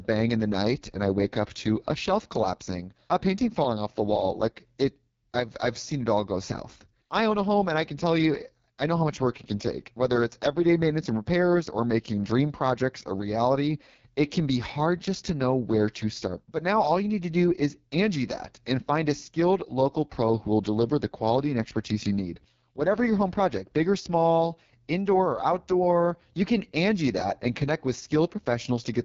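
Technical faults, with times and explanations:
Throughout, AMR wideband (HD Voice) codec: the speech is rough and raspy, which points to the codec's lowest mode, around 6.6 kbit/s. Here the vocal tract model is driven by too few pulses to carry the voicing cleanly. Above 6.4 kHz the band holds only synthetic shaped noise, and nothing at all above 7.4 kHz. A spectrogram shows a hard ceiling near 7.4 kHz, a smeared hiss band just beneath it, and blurred harmonics below.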